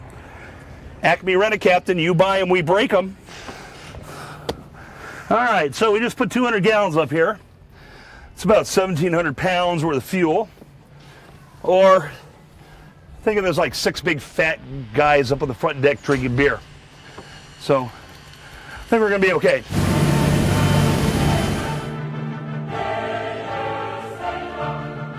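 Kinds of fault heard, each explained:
No technical faults are audible.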